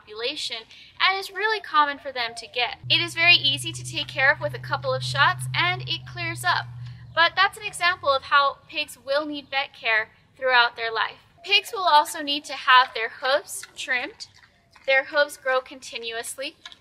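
No technical faults can be heard anywhere here.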